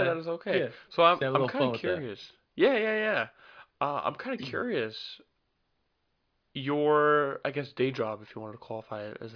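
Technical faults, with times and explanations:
No technical faults are heard in this speech clip.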